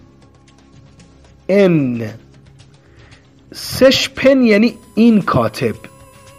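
At 4.69 s a USB whine begins and runs to the end of the clip at 6.38 s. Current drawn by the USB bus in regular 1 ms frames is leaking into the audio path through the power or ground wiring, and that 1 ms rhythm becomes a steady tone at exactly 1 kHz. It sits at fixed pitch, strongest at 1 kHz, roughly 40 dB below the sound, a thin, constant whistle under the audio.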